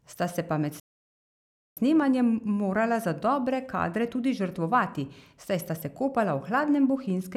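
At 0.80 s, after "se pa med", a playback stall silences the speech for 0.97 s, likely a starved or blocked player, showing as a flat waveform and blank spectrogram gap before "snemanjem morala za dobre".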